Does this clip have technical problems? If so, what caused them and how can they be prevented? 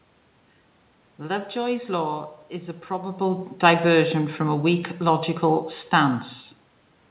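No, the clip has no technical problems. The speech carries nothing above 4 kHz and the usual coding noise of a telephone-band call path, which fits G.711 mu-law at 64 kbps, while the room's background noise and the level change around 3 s, where the talker shifts relative to the microphone, belong to the recording itself.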